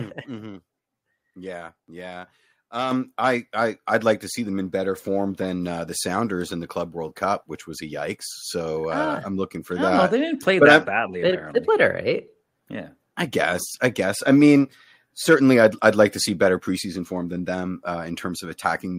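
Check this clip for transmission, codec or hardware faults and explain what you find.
The clip has one hardware fault, a microphone volume stepped up twice: at 2.91 s by about 6 dB and at 4.95 s by about 3 dB. Each time the input gain jumps instantly, so the speech and the background rise together. A compressor's smooth riding would change level gradually instead.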